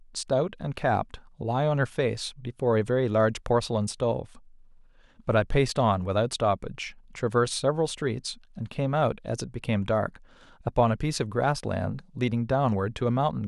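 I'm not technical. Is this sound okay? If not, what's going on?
Yes, nothing in this speech recording points to a technical problem with the audio signal itself.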